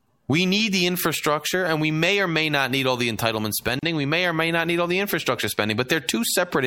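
Gap at a join of encoded pieces in this speech at 3.79–3.83 s, right after "need all the entitlement": a 36 ms gap left by untrimmed encoder delay and end padding.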